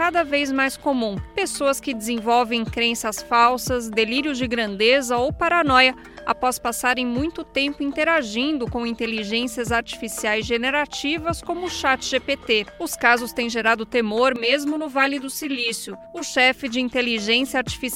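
From 14.36 s to 16.35 s the audio turns hollow and phasey, the signature of channel delay causing comb filtering. One channel lags the other by roughly 10 ms, and when the pair is folded to mono the shared content cancels at evenly spaced frequencies: the first notch falls near 50 Hz, with further notches about every 100 Hz above it. Those fixed gaps strip body from the sound, leaving a thin, tubby colouration for that stretch.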